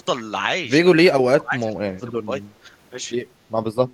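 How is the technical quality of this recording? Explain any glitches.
The recording has two stretches where the speech is suppressed in double talk. From 0.96 to 1.71 s the speech sinks sharply, by roughly 25 dB at its worst. From 1.91 to 2.32 s it dips again, by about 15 dB. The likely cause is an echo canceller that heard both sides at once. It could not tell this talker from the loudspeaker echo, so it turned everything down. The speech fades in those spans.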